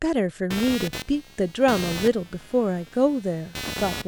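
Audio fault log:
0.50 to 4.08 s, computer activity noise: a buzzing chirp pulsing at around 200 Hz, roughly 10 dB below the speech, runs to the end as processor or graphics load disturbs the shared audio ground. It tracks machine activity rather than the speech, unlike steady mains hum.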